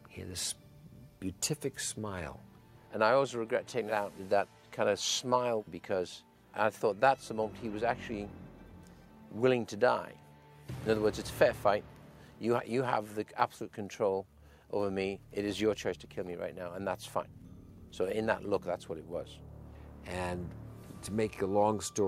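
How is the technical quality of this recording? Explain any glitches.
No glitches turn up anywhere in this recording. Nothing in the audio stands out as a technical fault that needs explaining.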